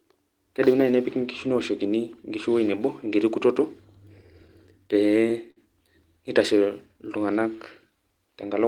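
From 4.05 to 5.58 s, just after "ewoi nebo enkiti kutoto", the speech shows repeated stalls (stutter). Packets reached the receiver late, so its jitter buffer ran dry eight separate times. At each gap the receiver continued the last sound instead of going silent. Together these fills add 130 ms, the longest 57 ms, about 9 percent of that stretch. No speech is lost, but delivery drags and catches in short hitches.

From 6.59 to 8.03 s comes a jitter buffer slow-down. With its reserve low or its target delay just raised, the receiver rebuilt it by repeating single pitch periods and small slices of pauses in succession, adding 82 ms in total. The passage plays at roughly 95 percent speed with unchanged pitch, so sounds come out slightly drawn out and stretched.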